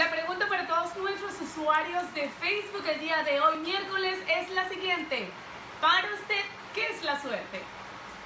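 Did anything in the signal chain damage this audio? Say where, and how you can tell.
Yes. The damage is in the sample-rate conversion stage, a resampler restarted on every block. A small tick recurs every 0.25 s throughout, a steady 4 Hz pattern. That spacing matches 250 ms processing blocks. The audio was converted from 48 kHz to 16 kHz one block at a time. The converter never saw the neighbouring samples across each block edge. So every boundary carries a small error, heard as a regular tick.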